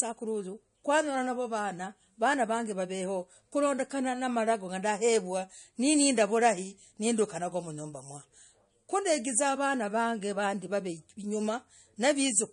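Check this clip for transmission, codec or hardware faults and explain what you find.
One codec fault runs through the entire clip. The speech sounds watery and swirly, with chirpy, metallic s sounds and nothing above 10.1 kHz. That is likely MP3 compression at a low bitrate, around 40 kbps. Short of bits, the encoder cuts off the treble and lets weak frequency lines flicker on and off between frames.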